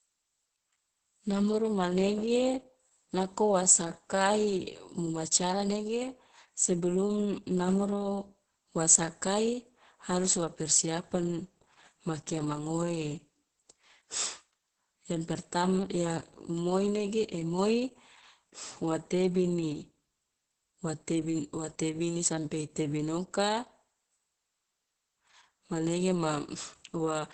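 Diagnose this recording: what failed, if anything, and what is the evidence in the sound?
Opus voice compression, audible for the whole recording, is a codec-stage failure. Nothing reaches above about 8.7 kHz, the mark of Opus running its SILK linear-prediction coder in wideband mode. The speech sounds muffled, hoarse and faintly robotic because SILK models the voice with a coarse prediction filter and codes the excitation with very few bits. The heavy damage points to a rate near 10 kbps, with the usual 20 ms frames.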